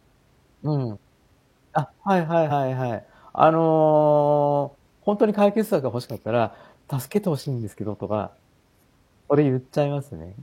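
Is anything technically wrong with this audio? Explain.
Yes. At about 2.47 to 2.51 s the speech is broken by damaged data in a compressed stream, a burst roughly 50 ms long. Part of the encoded data there is corrupt, so the decoder misreads those frames, loses sync and hunts for the next valid frame header. The result is a brief break in the speech at that point.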